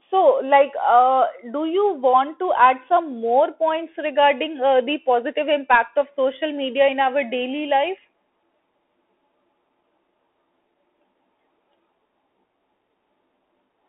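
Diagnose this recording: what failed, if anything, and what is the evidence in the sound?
The failure is at the codec stage: the speech has passed through a Bluetooth CVSD headset codec, which fits a 64 kbit/s one-bit delta stream with an adaptive step size. Throughout the recording the band is confined to roughly 300 Hz to 3.4 kHz, so the sound is thin and boxy. Where level rises quickly the step size cannot keep up, giving slope-overload distortion. Sibilants come out scratchy, and a granular hiss sits under the speech.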